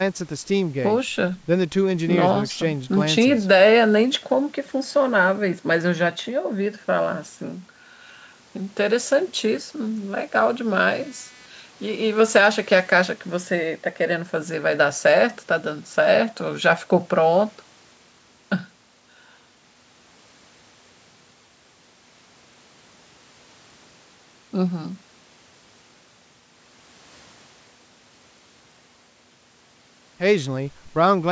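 From 10.91 to 13.11 s, a computer activity noise sits under the speech: a buzzing, chirping whine pulsing at a rate of around 300 Hz, roughly 30 dB below the speech. It tracks processor or peripheral load rather than the talker. Changing current draw shifts the ground reference that the audio circuit shares with the computer, and those fluctuations are picked up as signal. The speech itself, band-limited to 8 kHz by the call microphone processing, continues unaffected underneath.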